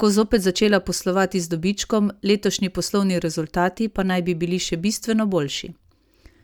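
No technical faults are audible.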